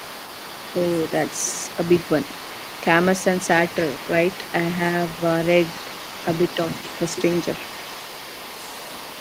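Speech, with the other side's voice leaking through from 0 to 9.2 s, roughly 15 dB under the talker. Likely the echo canceller missed the loudspeaker feed. Unlike reverberation, it is a separate voice, not a trail of the talker's own.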